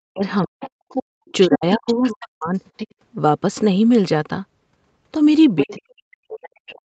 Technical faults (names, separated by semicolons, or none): speech suppressed in double talk; other side's voice leaking through; background gated by the echo canceller